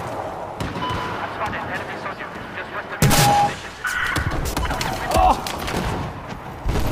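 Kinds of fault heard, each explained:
Loudspeaker feedback squeal: a microphone picked up its own loudspeaker and the loop gain rose above one at 815 Hz, so that tone fed itself, swelling over roughly a third of a second to sit about 5 dB above the sound before stopping near 3.56 s.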